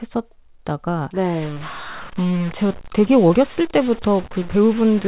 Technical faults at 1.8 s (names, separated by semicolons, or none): stuck bit